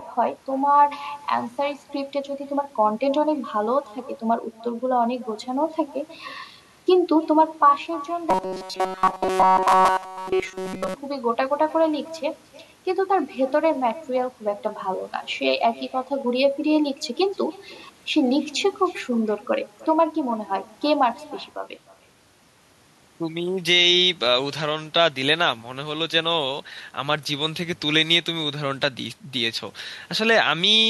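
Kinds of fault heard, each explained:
Echo with no canceller: Throughout the speech, every phrase is trailed by a faint, thinner copy of itself, arriving roughly a third of a second later and sitting about 22 dB below the direct voice. The far end is playing the call through a loudspeaker, its microphone captures that playback, and no echo canceller strips it out, so the talker's own voice returns after travelling the network and back.
Robotic sound from repeated short buffers: From 8.30 to 10.95 s the speech collapses into a hard, metallic buzz pitched at 188 Hz that only loosely tracks the talker's rhythm, with essentially none of the natural voice getting through. The likely cause is audio arriving too late, so the playback repeats a tiny fragment over and over in place of the missing sound. A 188 Hz buzz fits a repeated slice of about 5.3 ms.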